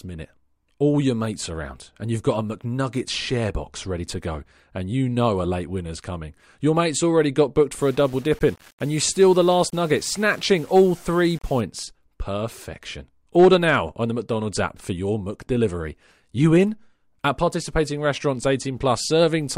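Low bit depth without dither runs from 7.80 to 11.61 s. The speech turns grainy, with distortion that shifts along with the sound at around 30 dB below it. The likely cause is rounding to 7 bits without dither, leaving error that tracks the signal.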